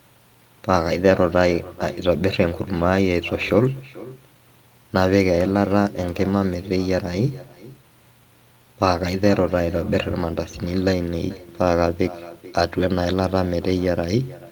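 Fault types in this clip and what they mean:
echo with no canceller: throughout the speech, each phrase returns about 19 dB quieter and thinner, roughly 400 ms later, after looping through the far end's loudspeaker and microphone. Unlike room reverberation, which smears directly into the sound, this is a distinct, delayed repeat.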